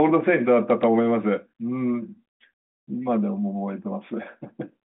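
Nothing's wrong here: it's a speech clip carried over a 40 kbit/s G.726 ADPCM telephone path, so it sits in the usual narrow phone band of roughly 200 Hz to 3.7 kHz with nothing above about 3.9 kHz, and that's just how that line sounds.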